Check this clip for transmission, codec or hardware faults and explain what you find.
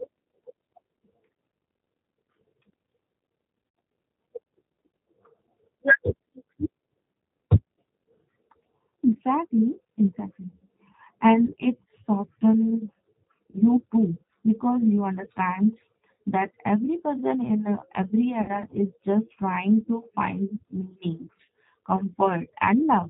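Two faults are present: G.729 codec coloration throughout, and six short dropouts from VoIP packet loss concealed by the speech codec.

The G.729 codec, here G.729A at 8 kbit/s, is plainly audible across the whole speech clip. Each 10 ms frame is rebuilt from a vocal tract filter, a pitch predictor and a few pulses. Nothing above 4 kHz survives, and the voice sounds rough and synthetic.

VoIP packet loss concealed by the speech codec occurs at 3.69, 11.45 (just before "it softens"), 13.51 (just before "too because you understand"), 16.22 (before "that every person in"), 18.42 and 21.45 s. Each gap is 30 or 60 ms, which fits one or two lost packets. The decoder extrapolates its last pitch and filter, so each gap becomes a brief buzzy or noisy smear that fades, and the voice recovers weakly afterwards.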